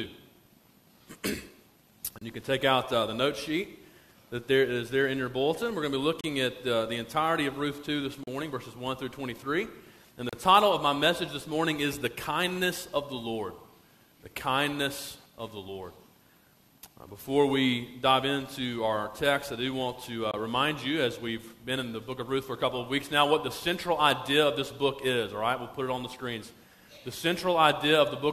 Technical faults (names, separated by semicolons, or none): gap between stream segments